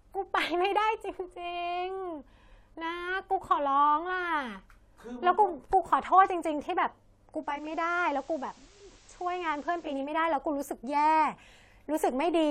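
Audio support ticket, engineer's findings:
Digital radio blending to analogue, 7.32 to 10.18 s. Receiver lost the digital stream and cross-faded over about 0.46 s to the FM broadcast of the same station, then back. On FM, hiss rises to roughly 30 dB under the signal, and level drops about 1 dB. Probable component: hybrid tuner's digital/analogue blend logic responding to weak digital reception.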